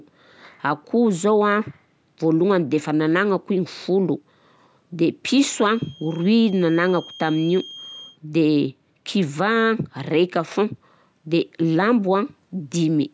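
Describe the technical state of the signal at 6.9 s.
At 6.9 s the speech carries a feedback whistle, running from 5.43 s to 8.19 s. A steady 3.2 kHz tone sits roughly 20 dB below the speech, thin and slowly swelling and fading in level. The likely cause is a loudspeaker-to-microphone loop held right at the edge of feedback, so one frequency rings without building up. On a spectrogram it shows as a narrow horizontal line at 3.2 kHz, well inside the call band that stops at 8 kHz.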